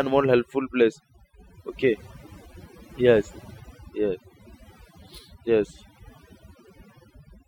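Overdone noise removal runs through the whole speech recording. The noise reducer was set too hard. It cuts individual frequency bands whenever they sit near its noise estimate. Quiet speech detail vanishes too. Pauses fall to near silence with twinkling specks.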